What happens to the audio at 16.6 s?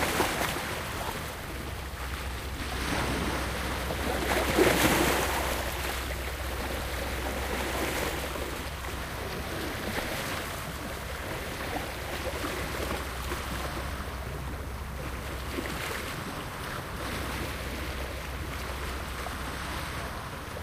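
Chunks out of order, from 16.6 to 17.0 s: one 200 ms chunk plays a chunk late, swapping two segments and leaving hard joins through a brief jumbled moment.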